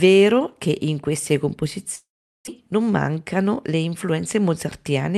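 From 1.95 to 2.49 s the sound stops being new: the last fragment is stretched into a fading buzz and then gives way to silence. When the audio resumes, about 0.4 s of it is simply gone, which points to a long network dropout as the likely cause.

From 2.56 to 3.53 s a jitter buffer speed-up follows. The receiver, holding roughly a tenth of a second too much audio, clips out short pitch-period pieces repeatedly, so speech runs at 110% speed with unchanged pitch and sounds hurried.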